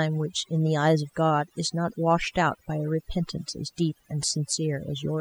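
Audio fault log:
Throughout: overdone noise removal. A noise reduction stage set far too aggressively has switched off individual frequency bands near its noise estimate, taking the quieter parts of the speech with them. The background drops and breaks up into twinkling specks. A spectrogram shows scattered isolated dots between phrases and ragged, hollowed-out harmonics within them.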